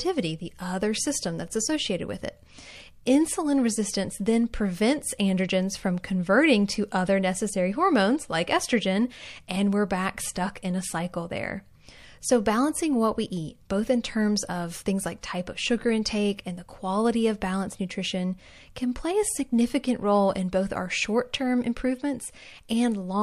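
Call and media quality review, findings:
Pre-echo at 15.21 s: brief hiss about 11 dB above the floor, landing 19 ms ahead of a sharp speech onset that sounds smeared. Probable component is a transform codec with a 36 ms window that never switched to short blocks. The noise comes before the attack, unlike a reverb tail or a click.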